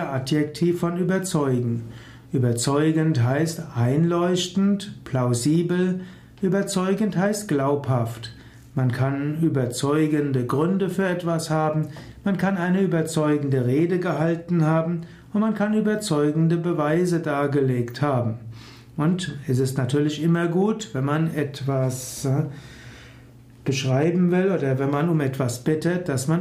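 No technical faults can be heard anywhere in the recording.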